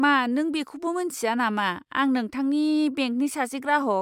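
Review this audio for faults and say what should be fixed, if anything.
Nothing in the speech needs fixing, since no fault can be heard anywhere in it. With nothing to prevent, no change to the recording or playback chain is called for.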